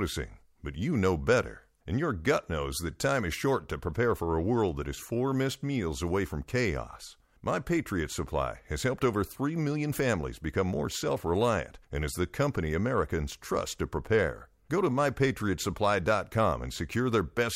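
Listening closely to the speech, nothing stood out as a technical fault at any point.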